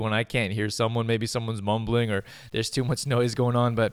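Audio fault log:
2.02–3.93 s, low bit depth without dither: from here to the end the speech turns gritty and grainy, the roughness shifting with the voice and sitting around 40 dB below it. The likely cause is undithered truncation to roughly 9 bits, so the rounding error tracks the signal.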